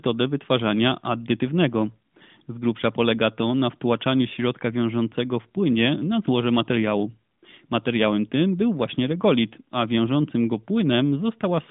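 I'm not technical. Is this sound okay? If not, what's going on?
Yes, this speech has no technical faults, and it sounds like an ordinary mobile phone call because it was carried by the AMR narrowband mobile codec, which keeps only the phone-line range and leaves out the higher sounds above about 3.7 kHz.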